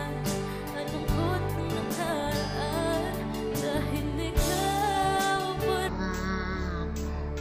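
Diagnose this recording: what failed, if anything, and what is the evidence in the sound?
From 5.89 s to the end, the sound drops to half speed and a full octave lower, with a mirrored image in the upper half of the spectrum. This is stereo read as mono at the sample-format conversion stage: interleaved left and right samples were played one after another as a single channel.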